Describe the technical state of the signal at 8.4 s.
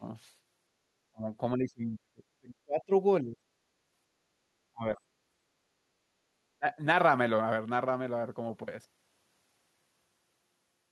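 At 8.4 s the speech signal is intact, with no audible fault at that moment.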